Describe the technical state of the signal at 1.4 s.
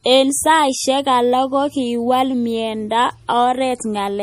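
MP3 compression damage is present at 1.4 s, as it is throughout the whole clip, and is likely the cause of what is heard. The encoder splits the speech into narrow frequency lines and spends bits only where its hearing model expects them to matter. At a starved rate, which fits roughly 40 kbps, it drops everything above 15.1 kHz and zeroes weak lines frame by frame. The result is plainly audible as a watery, swirling texture with smeared attacks.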